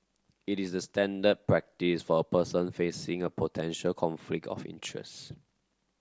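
No technical faults can be heard anywhere in this speech recording. Nothing breaks into or disturbs the audio at any point.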